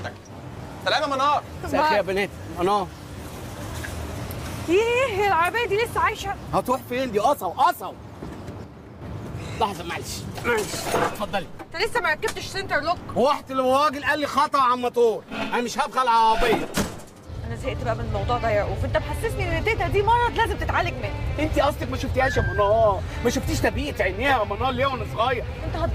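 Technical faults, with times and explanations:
8.64–9.02 s and 11.58–11.80 s, one channel drops out: the sound suddenly falls about 6 dB for a moment, likely because one stereo side cut out before the mono fold-down.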